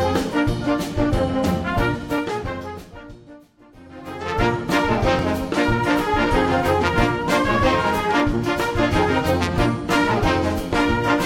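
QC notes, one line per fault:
5.19 s and 8.20 s: overlapping chunks. Each 3 s chunk starts about 7 ms early, so that sliver replays at the join, heard as a brief click.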